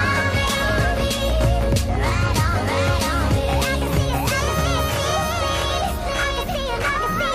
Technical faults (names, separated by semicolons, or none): doubled audio track